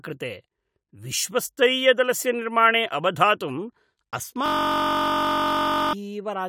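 At 4.46 s the speech stops and is replaced by a system hang loop that lasts until 5.93 s. The driver or host froze while the audio hardware kept replaying the same ring buffer. One 21.33 ms slice repeats exactly, roughly seventy times, which fits a 1024-sample buffer. A cycle that short produces a steady, hard-edged buzz at about 47 Hz rather than a stutter. Around a second and a half of the real audio is missing.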